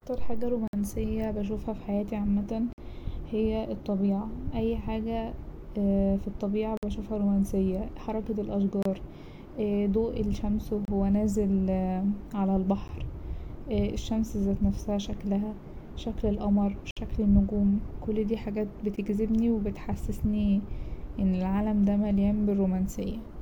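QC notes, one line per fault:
0.68–0.73, 2.73–2.78, 6.77–6.83, 8.83–8.86, 10.85–10.88, 12.88, 16.91–16.97, 18.96 s: gap between stream segments, hard-edged silences of 10 to 59 ms, at 2-second segment boundaries, where misaligned time stamps leave holes the player fills with silence.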